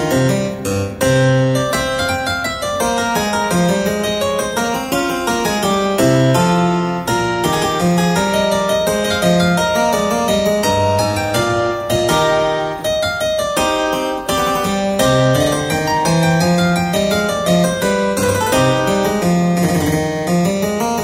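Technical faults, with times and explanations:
Nothing stood out as a technical problem on listening to this clip.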